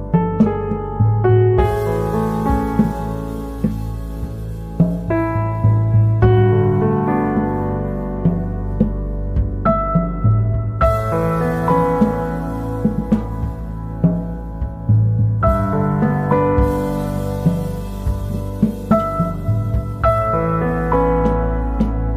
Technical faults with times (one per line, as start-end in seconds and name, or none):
none